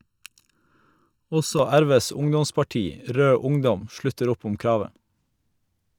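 Channel delay (comb filtering) affects the speech from the start to 1.59 s. One channel arrives a fraction of a millisecond behind the other, and when the two are summed to mono, the shared signal cancels wherever the offset equals half a cycle. The first notch falls around 700 Hz, with further notches spaced evenly up through the kilohertz range. The speech sounds hollow and phasey, as if heard through a tube, until the alignment returns at 1.59 s.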